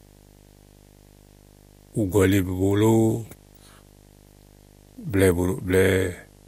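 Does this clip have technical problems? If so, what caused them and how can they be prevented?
Yes. Video or display buzz runs throughout: a 50 Hz buzz with hash above it and a 15.6 kHz line-rate whine, roughly 30 dB below the speech. A screen or video cable is leaking its scanning signals into the audio path. Use balanced, shielded audio lines routed away from displays and video cables.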